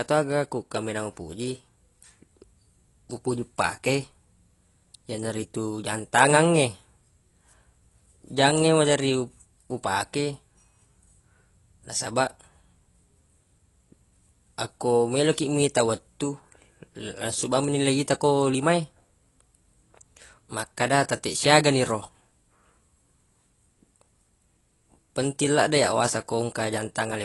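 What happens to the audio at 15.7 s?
At 15.7 s the speech sounds dull and smeared, with a fizzy, warbling texture on sibilants and held sounds, and nothing at all above 11.5 kHz. That moment is no different from the rest of the clip: the damage runs throughout. It is likely AAC compression, consistent with AAC-LC at around 32 kbps. At that rate the encoder lowers its cut-off and quantises coarsely, starving bands of bits so they blur or fill with substitute noise.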